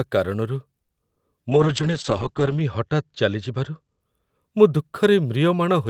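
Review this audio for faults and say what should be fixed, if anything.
Around 0.83 to 0.90 s there's a short stall from a late packet. The jitter buffer ran dry, so the receiver held the last bit of speech for about 50 ms until the packet showed up, then carried on where it left off. Nothing's actually lost, just a stretched, slightly buzzy sound. A slightly deeper or better-adapting jitter buffer would absorb that delay.

At 1.14 to 1.18 s you get a short concealed packet loss. Roughly 20 ms never arrived in time, and the decoder papered over the gap by extending the preceding sound and blending back in, which comes across as a quick smear or wobble. Forward error correction or redundancy on the stream would cover drops this small.

From 1.52 to 4.06 s there's a call bitrate drop. The bandwidth estimate fell and the encoder went from 32 kbps down to 8 kbps, bottoming out for about 1.1 s, with the audio bandwidth shrinking from 20 kHz to 8 kHz. 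That's why the speech turns muffled and a bit rough. Smoother congestion control, or a higher bitrate floor, would keep the quality from sagging this far.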